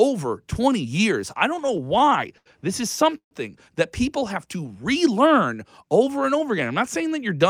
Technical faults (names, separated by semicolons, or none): repeated stalls (stutter); call audio freeze; jitter buffer slow-down